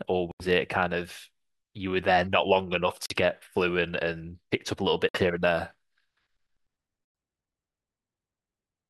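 The speech cuts to silence four times, at 0.31 to 0.45 s, 3.06 to 3.16 s, 5.09 to 5.20 s and 7.05 to 7.15 s, each hole about a tenth of a second long. When the sound returns it has moved on, as if it kept playing through the gap. This is likely a Bluetooth dropout: audio packets reached the headphones too late and were discarded, leaving silence until good data arrived.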